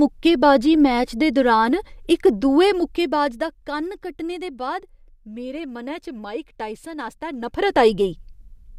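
A gain control is being stepped rather than smoothed, producing zipper noise twice in this speech. From 2.69 to 3.72 s, between "दे दुरान इक दुए" and "कन्न कट्टने दे", the level drops by around 10 dB in 1 dB jumps at about ten per second, each jump leaving a faint tick. From 7.34 to 7.80 s it climbs by around 10 dB in coarser 2 dB jumps.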